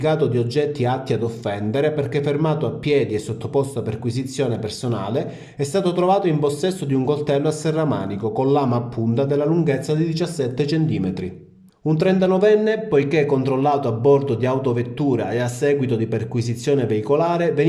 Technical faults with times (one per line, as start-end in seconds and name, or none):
none